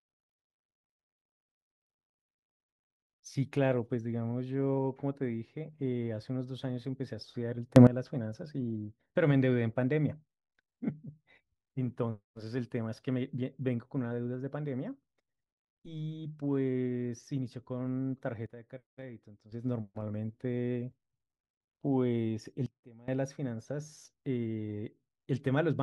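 Speech with a sudden gain jump three times: up about 18 dB at 7.76–7.87 s, down about 12 dB at 18.46–19.52 s, and down about 20 dB at 22.66–23.08 s. Voice and noise floor shift together, likely from unramped gain changes, showing as vertical steps in the waveform envelope and spectrogram.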